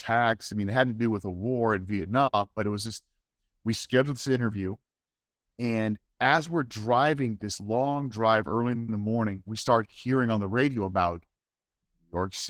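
From start to finish the speech carries Opus voice compression, with plainly audible damage. The sound suggests the hybrid mode, with a SILK linear-prediction layer for the lower band and a CELT layer above 8 kHz, at a rate that fits about 16 kbps. At that rate the excitation is coded coarsely, so the voice sounds hoarse and slightly robotic.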